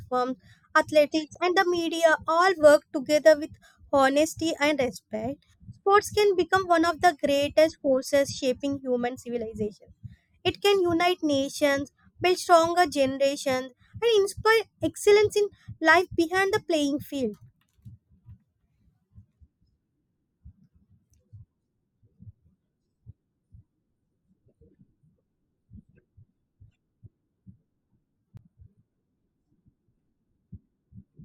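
At 1.34 s and again at 28.37 s the speech drops into a block of digital silence, about 11 ms and 18 ms long, where output samples went missing and were replaced by zeros. The first gap, under 15 ms, comes across as a tick rather than silence, unlike a smooth dropout that fades down and back.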